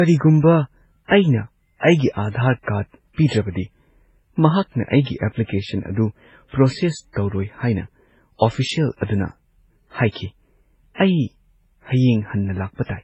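Throughout the speech, the audio sounds as if it was encoded more than once. The likely cause is transcoding between lossy codecs, with a very low-rate MP3 pass, which fits about 16 kbit/s, later re-encoded as HE-AAC at what points to around 32 kbit/s. The second encoder spends its bits reproducing the first one's artefacts and adds its own, so both sets of artefacts layer together, and nothing survives above 8.6 kHz, leaving the top end dull.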